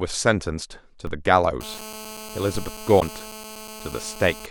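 Speech, and a few things go wrong. There's a DC step at 1.07 s and another at 2.55 s. The zero line jumps suddenly, so you get a low thump each time, and the offset then drains away slowly, the way a roughly 2 Hz high-pass would bleed it off. From 1.61 s to 4.46 s there's GSM phone buzz, a hard raspy 217 Hz buzz full of harmonics, sitting about 16 dB under the talker. It stays nearly steady, which points to a nearby 2G phone on a call whose radio bursts are being rectified in the audio circuit. Finally, at 1.77 to 1.79 s and again at 2.99 to 3.02 s, the audio jumps ahead with a brief glitch. That's likely a broken MP3 bit reservoir: frames went missing, so the next frame pulled borrowed bytes from the wrong place, and the glitch length fits 26 ms MP3 frames.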